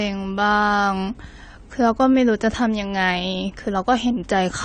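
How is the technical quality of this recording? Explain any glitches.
The quality's held back by one problem across the whole speech clip. Nothing comes through above 9 kHz, and the artefacts of the original encoding remain. That's likely low-bitrate audio saved at a high bitrate, which fits a 32 kbit/s AAC source re-encoded as 192 kbit/s MP3 that can't restore what was lost.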